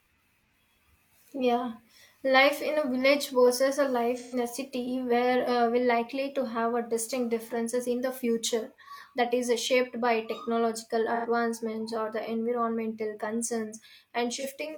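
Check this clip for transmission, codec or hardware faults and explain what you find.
The speech has four dropouts from AAC frame loss with concealment, at 4.17–4.35 s, 8.84–8.91 s, 11.15–11.26 s and 14.33–14.45 s. Compressed frames never reached the decoder, so it rebuilt each gap from the last good spectrum. The losses are brief, the longest fitting three frames of about 43 ms each. Each sounds like a short smeared, noisy or phasey patch where the speech blurs.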